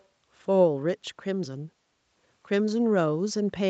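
From 0.00 to 0.05 s there is a faint echo leak. A delayed copy of the speech, about 290 ms behind, slips through very quietly, some 35 dB under the voice. The likely cause is a far-end loudspeaker whose echo canceller missed a brief scrap.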